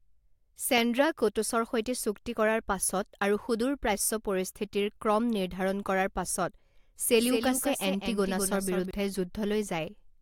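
From 7.19 s to 8.91 s the speech suddenly gains a second, trailing copy of itself, about a fifth of a second behind and somewhat quieter, roughly 5 dB down. It is crisp and full-range, with no room tail, and it switches on and off abruptly. This is a doubled audio track, likely the same signal captured again through a slower path, or an edit that left two copies out of alignment.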